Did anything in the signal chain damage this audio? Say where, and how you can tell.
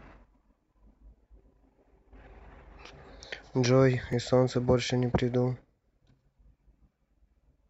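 Yes. The damage happens at the driver or buffer stage, as a repeated buffer in this speech at 2.89 s and again at 4.13 s. Each time, a tiny slice of about 5.8 ms plays twice, with a hard join where the copy starts. At this size it comes across as a brief click or buzz rather than a clear stutter. The length fits a 256-sample buffer. New audio arrived late, so the device replayed its last block once. Essentially nothing is skipped afterwards.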